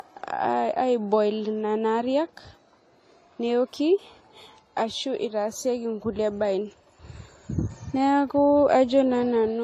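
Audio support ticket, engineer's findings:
Transcoding between lossy codecs, throughout the speech. Nothing above 14.1 kHz; smeared, swirly low-bitrate artefacts sit under a second codec's own coloration. Likely cause: a low-rate encode, consistent with AAC-LC near 32 kbit/s, re-encoded at a higher rate, fitting WMA around 96 kbit/s. The later encoder spends bits preserving the earlier damage, adds its own, and keeps the lower band limit.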